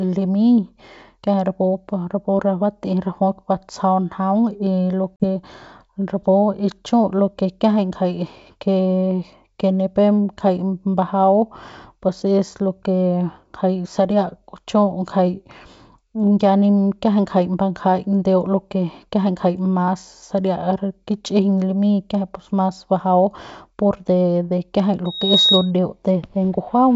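At 5.16 s there is packet loss on an ADPCM call. About 40 ms of speech, likely two packets, drops out as a hard-edged silent gap ending at 5.25 s. The decoder's predictor and step size lose track of the sender's. Speech resumes slightly distorted, then settles.

From 25.05 s to 25.71 s comes a loudspeaker feedback squeal. The microphone picks up its own loudspeaker, and the loop gain passes one at 3.8 kHz. A thin tone swells over about a third of a second, ending a few dB above the speech and cutting through the clear G.722 wideband sound.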